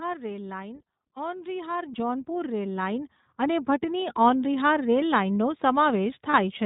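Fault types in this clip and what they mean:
iLBC codec: a narrowband, slightly rough and synthetic quality with nothing above 4 kHz, from a VoIP codec coding each 20 ms frame independently, which fits a 15.2 kbps mode.
Automatic gain rising: the voice and background swell together by about 14 dB between 1.14 and 4.16 s, as gain control raises level on quiet input.
Lost iLBC frames: a brief held, buzzy vowel-like sound at 6.30 to 6.36 s, where 40 ms of lost audio was filled by repeating the last pitch cycle.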